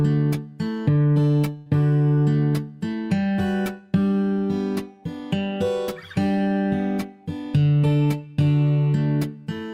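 The audio has a burst of packet loss from 1.57 to 1.68 s. Several consecutive packets never arrived in time, so the receiver stretched the last good sound across about 81 ms, fading it as the gap grew, and playback resumed with roughly 80 ms of material skipped. On a spectrogram this shows as frozen horizontal streaks that dim toward 1.68 s before an abrupt change; the waveform shows a repeating, decaying pattern ending in a sudden jump.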